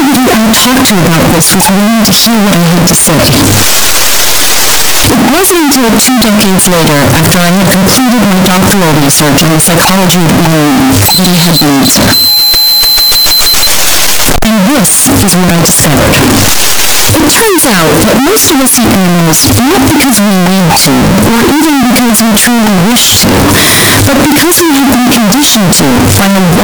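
Signed and unsigned mixed up, present from start to finish: the audio is harsh, heavily distorted and very loud, with quiet stretches as loud as everything else. The likely cause is 16-bit samples read with the wrong sign convention, which flips the top bit and turns every zero crossing into a full-range jump.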